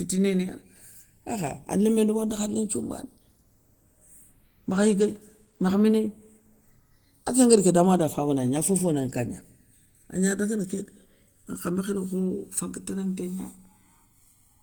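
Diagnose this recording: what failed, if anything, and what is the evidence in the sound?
Channels drifting apart at the converter stage, throughout: the interchannel delay grows to about a millisecond, so the mono sum flanges slowly in one direction, unlike a cycling effect, consistent with clocks roughly 100 ppm apart.

Speech sounds hoarse, grainy and muffled throughout, with content reaching 20.1 kHz, rough rather than MP3-like swirling. This is likely Opus compression in hybrid mode, fitting a low bitrate near 16 kbps.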